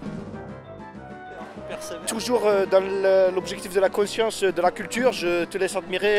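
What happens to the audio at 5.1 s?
At 5.10 s there is a block of digital silence, about 5 ms of zeros where the audio should be, as when an output buffer is not filled in time or a calculation yields invalid values. At this length it is heard as a tick or dip, not as silence.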